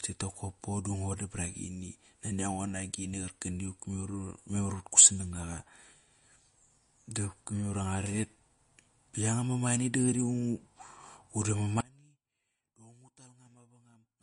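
MP3 compression runs through the whole clip, and its damage is plainly audible. The likely cause is an encoder starved of bits, which fits a low rate of around 40 kbps. With too few bits, weak frequency lines are dropped and return from frame to frame, leaving the speech unsteady in texture. Nothing survives above 10.6 kHz, so the top of the spectrum is simply missing, which dulls the consonants.

An audio dropout to a faint residue begins at 11.81 s and lasts to the end of the clip. The speech cuts away abruptly rather than pausing or fading. What remains is only a faint sound, roughly 30 dB below the normal signal. That points to the wanted signal being lost while the path after the break stayed live, likely a failure upstream rather than silence in the recording itself.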